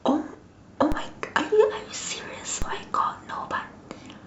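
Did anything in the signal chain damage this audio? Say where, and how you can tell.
Yes. A DC step occurs twice, at 0.92 s and again at 2.62 s, each heard as a low thump under the speech, which itself carries on unaffected. The stage is the converter or its analogue input: the waveform's zero line suddenly shifts by about -15 dBFS, as when an offset input is switched in or the converter recalibrates. Each offset then drains away through a roughly 5 Hz high-pass, giving a slow settling rather than a sustained shift.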